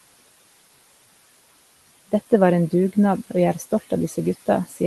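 Noise suppressor artifacts run through the whole clip. The room noise, sitting about 18 dB below the speech, is pulled down by about 17 dB in the gaps and comes back under the talking.

From 4.68 to 4.78 s, speech is cut by the noise suppressor. It mistakes this brief stretch of speech for background and turns it down, by about 11 dB at the deepest point. For roughly a tenth of a second, the sound seems swallowed.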